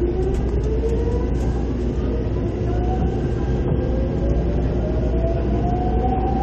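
A recording of everyday sounds that briefly stumbles at about 2.71 s: the audio jumps forward and a small slice of the sound is simply gone. This is compressed frames skipped. Frames of the encoded audio were never played, either missing from the file or rejected by the decoder as damaged. The gap of roughly 70 ms fits about three frames of 23.2 ms each.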